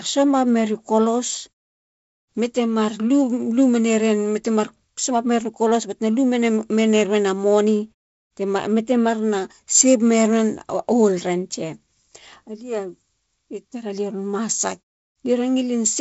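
No technical fault can be heard in this speech recording. It carries the slightly grainy sound of G.722 wideband telephone coding at 48 kbit/s with nothing above 7.7 kHz, and the muted pauses let the background drop to silence between phrases.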